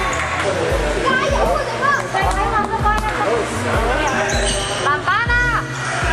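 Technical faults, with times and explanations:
Throughout: mains hum, a steady 60 Hz tone with low harmonics about 15 dB below the signal, from power-line coupling; a spectrogram shows constant horizontal lines.
2.63 s: DAB burbling, a brief patch of noise blips where bit errors slipped past error correction, putting short blips of noise in single sub-bands; a spectrogram shows scattered rectangular blotches.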